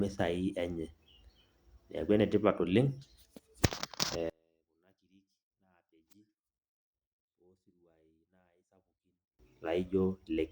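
From 4.30 s to 9.39 s the speech collapses. Its level falls by about 36 dB. What remains is faint, with the centred body of the sound almost gone. At 9.39 s full level returns abruptly. The likely cause is one channel inverted. One stereo channel has flipped polarity. When the two channels are summed, the material they share cancels. Only a weak residue of their small differences survives.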